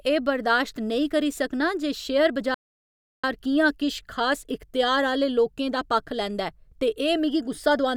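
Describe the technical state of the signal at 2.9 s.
At 2.9 s the signal sits inside a playback stall running from 2.54 to 3.24 s: the player likely ran short of data or had its thread held up, so output dropped to silence for about 0.69 s, cutting the speech off mid-flow before it resumed.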